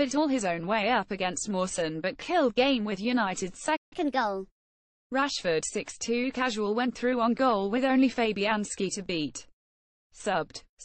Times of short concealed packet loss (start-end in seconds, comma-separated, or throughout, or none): none